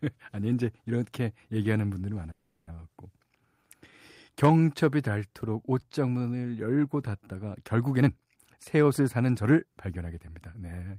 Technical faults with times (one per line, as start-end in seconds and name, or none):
2.31-2.73 call audio freeze
7.96-10.69 jitter buffer speed-up